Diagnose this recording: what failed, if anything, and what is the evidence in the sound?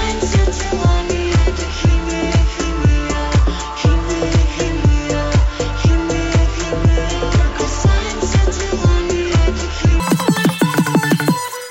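A wrong sample rate fault at the playback stage. From 10.00 s to the end at 11.70 s, the sound suddenly runs three times too fast. Its pitch jumps about 19 semitones, well over an octave. Speed and pitch rise together by the same ratio, with no rate conversion. That points to samples clocked out at triple their intended rate, which fits 16 kHz material being played at 48 kHz.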